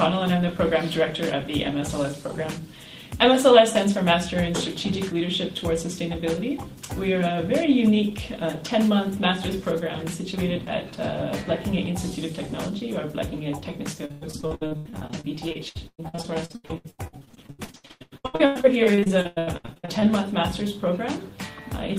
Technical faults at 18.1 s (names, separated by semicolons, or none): repeated packet loss (robotic sound)